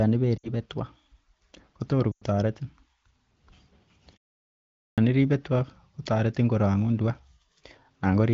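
At 0.38 s and 2.12 s, lost AMR speech frames: the decoder repeats the last good frame with falling gain, so the sound drops to near silence within two frames during a 60 ms and then a 100 ms loss before it returns rough.

At 4.90 s, a clipped start after a pause: after 0.81 s of silence the output device wakes late, swallowing the first 77 ms of "iribe tua kotoretin korong'un", which starts abruptly.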